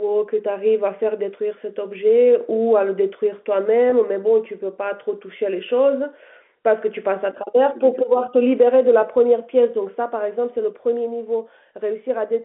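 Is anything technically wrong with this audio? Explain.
Yes. Packet loss with pitch repetition occurs at 3.90 to 3.92 s, where about 20 ms of speech goes missing, which fits a single lost packet. The receiver fills the gap by repeating the last pitch period it received, so instead of a dropout the speech briefly holds with a slightly buzzy, sustained quality before normal speech resumes. The G.711 telephone band of roughly 200 Hz to 3.5 kHz is heard throughout.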